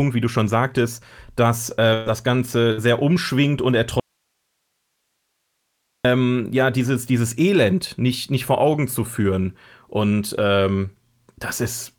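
Speech, with two bursts of packet loss. At 1.93 s to 2.09 s, about 120 ms of audio goes missing. The receiver holds the last sound for about 125 ms and fades it. At 2.72 s to 2.80 s, about 60 ms is lost and concealed the same way. In both cases the speech then resumes further on. From 4.00 s to 6.05 s there is an audio dropout to a faint residue. The speech cuts out abruptly for about 2 s. Only faint hiss remains, far below the speech level. The likely cause is the signal feed failing while the path after it stayed live.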